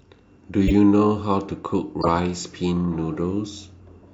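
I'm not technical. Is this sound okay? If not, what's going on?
No. A corrupt frame was decoded twice: damaged chunks of the compressed speech data were played anyway, putting sound at wrong pitches. You hear brief squeaky, noisy blips at 0.67 to 0.72 s (louder) and 2.01 to 2.08 s, each lasting a few tiny chunks.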